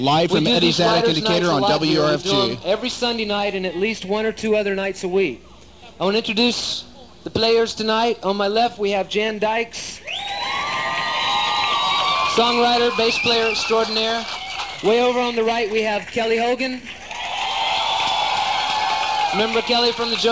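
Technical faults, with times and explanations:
No technical faults can be heard anywhere in the audio.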